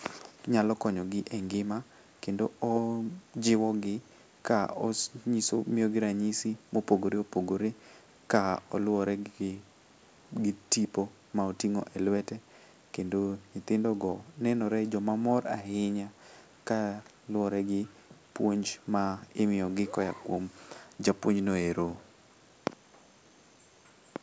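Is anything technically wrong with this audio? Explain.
No, nothing is technically wrong with this speech recording. It has passed through a call's microphone processing, which has trimmed the lowest bass and leaves nothing above 8 kHz, as that path normally does.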